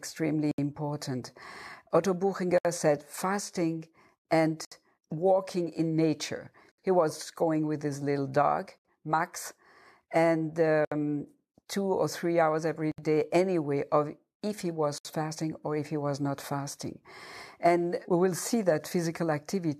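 Speech encoded in separate pieces of about 2 s each, joined without trimming the encoder's start-up delay or the padding on each piece's last frame, causes a gap at a join of encoded pieces. That dead air opens at 0.51, 2.58, 4.65, 6.72, 8.78, 10.85, 12.92 and 14.98 s, about 70 ms the first time and 67 ms thereafter. Each is a short, smeared dropout cutting into the speech, which then resumes exactly where it stopped.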